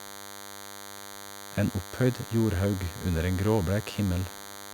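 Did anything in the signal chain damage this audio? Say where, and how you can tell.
Yes: DECT cordless phone buzz runs through the whole speech clip, picked up in the analogue wiring. A nearby handset's radio bursts, rectified by the audio circuit, leave a thin, steady 100 Hz buzz dense with harmonics, sitting about 15 dB below the speech, unlike the rounder, sparser hum from mains.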